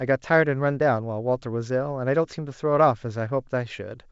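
Nothing goes wrong anywhere in this speech; it's just the usual G.722 wideband telephone sound at 64 kbit/s, with the band reaching up to about 7 kHz and at most a faint trace of the coding in the upper range.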